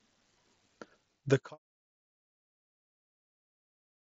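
No technical faults can be heard in the speech. The Bluetooth mSBC headset link keeps it within 8 kHz with a light grain on the loudest sounds, and a smooth fade-out beginning at around half a second takes the level down by 1.58 s.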